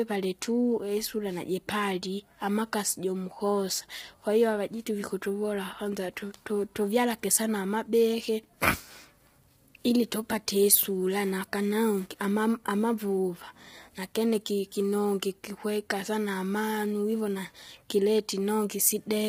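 Low-delay AAC compression affects this speech throughout: heavy grainy roughness, noise between harmonics, nothing above 15.8 kHz, likely AAC-ELD's short frames at a bitrate near 24 kbps.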